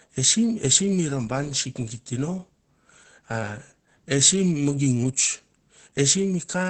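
From start to finish the speech sounds muffled and hoarse, with the upper treble missing. The cause is likely Opus compression running heavily in its speech (SILK) mode, where the encoder models the audio as a voice signal and discards detail it cannot afford. The band limit near 8 kHz matches wideband operation, and the depth of the damage fits a bitrate around 12 kbps.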